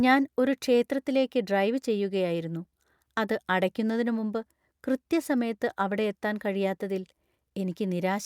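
No technical faults can be heard anywhere in the recording, with the signal holding steady and continuous at every point.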